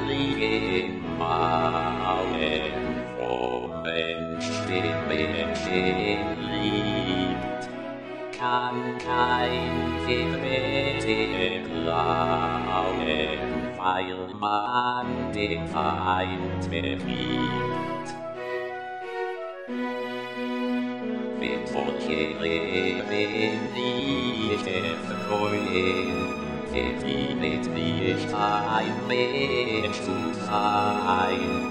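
From 0.0 to 6.0 s, an adaptive stream starting at a low bitrate, consistent with 32 kbit/s AAC, holds until the player switches to roughly 96 kbit/s. Until then nothing sounds above 9.9 kHz and codec artefacts are heavier; at 6.0 s the treble returns abruptly, gaplessly.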